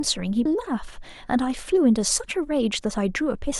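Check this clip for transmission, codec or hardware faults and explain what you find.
One fault is present: a brief burst of damaged data in a compressed stream at 0.44 s. It sounds like a short chirp, click or hole that cuts across the speech for about 16 ms. The compressed data at that point was corrupted, so the decoder misread the affected frame, lost its place in the stream and had to find the next valid frame header before it could decode cleanly again, leaving that short disturbance where the good audio should be.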